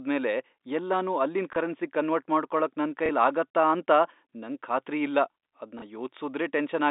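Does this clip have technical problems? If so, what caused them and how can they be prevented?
Yes. Packet loss with the last packet repeated: at 1.53 s (just after "ಎಲ್ಲನೂ ಅಲ್ಲಿನ್"), 3.06 s (just after "ಅಲ್ಲಿನ್ ಕರೆನ್ಸಿಗ್ ಕನ್ವರ್ಟ್ ಮಾಡ್ಕೊಳಕ್") and 5.79 s, a 30 ms stretch of the stream never arrived, which fits a single dropped packet each time. The receiver filled each gap by replaying the previous block of audio. That block doesn't line up with the pitch period, so each repeat gives a small blip within the narrow G.711 telephone band. To prevent it, use a jitter buffer with proper packet loss concealment that interpolates or smoothly fades across gaps instead of repeating the last packet, and reduce loss on the network path.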